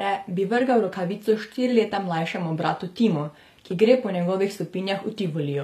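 It's a speech clip, and the whole thing carries plainly audible HE-AAC compression damage. The top end still sounds bright, but it's been rebuilt rather than carried through: the s sounds come out gritty and a bit lispy, with a metallic sheen that doesn't sit naturally on the lower voice. That's likely spectral band replication patching copied low bands upward under a coarse envelope, which fits a low bitrate around 24 kbps.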